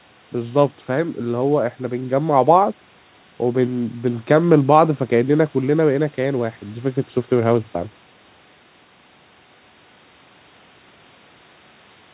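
Nothing goes wrong anywhere in this speech. It sounds like an ordinary phone-quality call: the top end stops at about 4 kHz, which fits a narrowband G.711-style codec, and a faint room noise sits roughly 35 dB below the talking.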